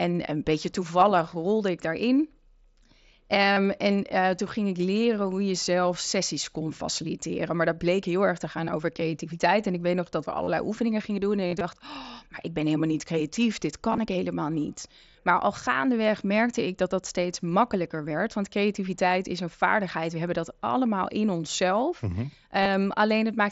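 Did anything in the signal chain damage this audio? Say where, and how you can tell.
Yes. Concealed Bluetooth headset packet loss occurs at 1.00, 3.53–3.57, 10.44–10.48, 11.47–11.61, 13.92–14.00, 15.11–15.15 and 22.62–22.66 s. The wireless link dropped voice packets, so the receiver patched each gap by repeating a matching stretch of recent waveform. The longer runs sound buzzy and tonal, with a small warble as real audio resumes.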